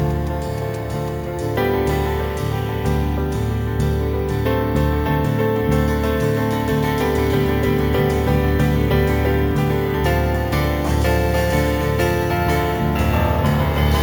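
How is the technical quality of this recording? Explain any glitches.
The recording has one fault present throughout: imaging from sample-and-hold upsampling. The audio was raised from 16 kHz to 48 kHz by holding each sample for three output samples with no smoothing filter. That stair-stepping mirrors the original band into the space above it, so a reflected copy sits between 8 kHz and 16 kHz at about 24 dB below the signal. It is heard as a metallic fizz that rises and falls with the sound. On a spectrogram, an inverted duplicate of the 0 to 8 kHz content fills the 8 to 16 kHz band. Zoomed in, the waveform shows flat steps three samples wide.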